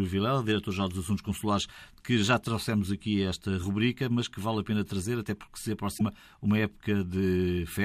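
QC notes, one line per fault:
5.94–6.01 s, damaged data in a compressed stream: corrupted bytes throw the decoder out of frame sync, so the speech breaks into a brief glitch for about 70 ms.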